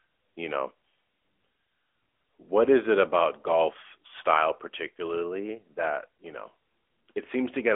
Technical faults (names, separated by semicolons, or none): AMR narrowband mobile codec